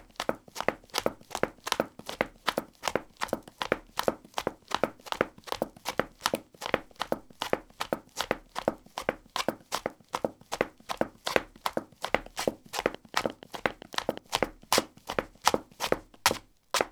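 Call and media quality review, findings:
Train of clicks, 12.95–14.18 s: around ten uneven ticks, roughly 9 per second, peaking about 10 dB over the sound. Likely interference pickup or a struggling interface.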